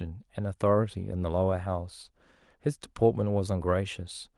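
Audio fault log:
No faults are heard anywhere in this speech recording. There is nothing here that calls for a timed entry.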